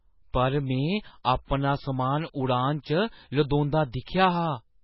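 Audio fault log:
throughout, MP3 compression: the treble stops dead at 5.5 kHz and the speech has a heavy watery, swirling quality as weak frequency components flicker in and out between frames, likely from MP3 encoding at a very low rate, which fits about 16 kbps.
3.49 to 3.51 s, pre-echo: a brief hiss runs about 20 ms ahead of a sharp attack, because the coding noise meant for the loud onset is spread across its whole block, filling the quiet moment before it and softening the attack.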